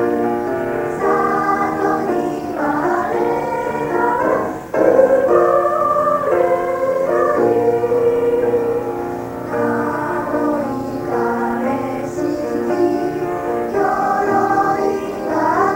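Nothing goes wrong anywhere in this audio; there isn't a single technical fault to point to at any moment.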